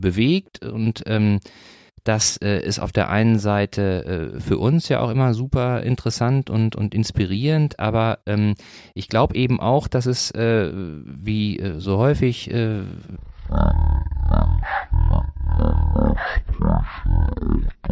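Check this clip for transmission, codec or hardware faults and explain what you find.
One fault is present. From 13.16 s to the end, a wrong sample rate slows the speech to about 0.36 times speed. Pitch drops roughly 17.6 semitones, which fits 44.1 kHz audio played at 16 kHz.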